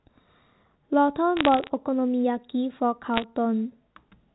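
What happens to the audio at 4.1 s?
Nothing goes wrong at 4.1 s: the speech carries on intact there, with the band-limited sound of G.711 telephone coding.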